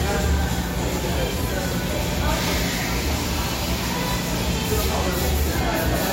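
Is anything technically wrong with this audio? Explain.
Yes. Transcoding between lossy codecs runs through the whole clip. Nothing reaches above 15.9 kHz, leaving the top end dull and sealed off. Smeared, swirly artefacts of two different characters sit on top of each other, which points to an MP3 stage followed by AAC-LC. This is likely a chain of re-encodes: the second encoder spends its limited bits reproducing the first one's damage, adds its own, and keeps the lower bandwidth limit.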